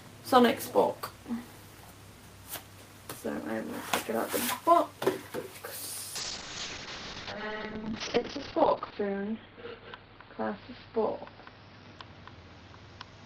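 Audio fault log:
6.16–13.25 s: call bitrate drop. The sound turns coarse and watery, and its top end falls from 20 kHz to 6 kHz. This fits the encoder being cut from about 32 to 8 kbps after the bandwidth estimate fell. The worst stretch lasts 2.57 s.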